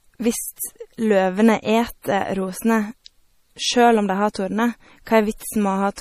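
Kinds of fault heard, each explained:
MP3 compression: The speech is likely MP3-encoded, and the damage is plainly audible throughout, with a watery, swirling quality where weak frequency lines drop in and out between frames. Sibilants sound metallic, and the sound fits a starved bitrate of around 40 kbps. Unlike a simple low-pass filter, which only dulls the treble evenly, this damage fluctuates and chirps from moment to moment, which marks a perceptual codec.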